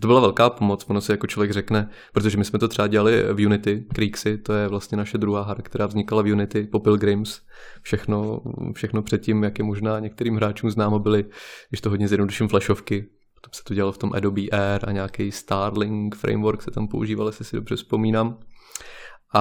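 Right from the start and all the way through, the speech carries a crude rate conversion. Samples were simply dropped or repeated with no filtering, which fits a 48 kHz to 44.1 kHz conversion. The error sits roughly 30 dB below the voice as a gritty, inharmonic fizz riding on louder and brighter syllables.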